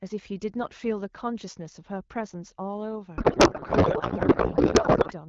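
At 3.17 s the speech gives way to garbled noise and warble that barely tracks the talker, continuing to 5.13 s. This is a codec payload misread: the receiver unpacks the AMR-WB bitstream with the fields shifted, as happens when octet-aligned frames are parsed as bandwidth-efficient. The decoder runs on valid-looking but wrong parameters. Before the fault, the HD Voice codec sounds consistent with a 12.65 kbit/s mode, clear with light coding texture.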